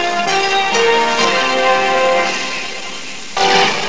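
No technical faults are audible.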